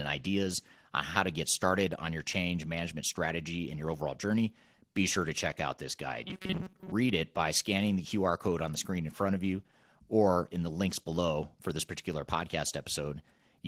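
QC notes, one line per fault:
throughout: Opus voice compression. Speech carries plainly audible coding damage, sounding hoarse and slightly robotic. This points to a low bitrate near 16 kbps in hybrid mode, with linear-prediction coding below 8 kHz and a coarse transform layer filling the top band.
6.23–6.92 s: robotic sound from repeated short buffers. Speech turns into a rigid metallic buzz at 188 Hz while still loosely following the speech. The likely cause is a segment of about 5.3 ms being looped in place of most of the incoming audio.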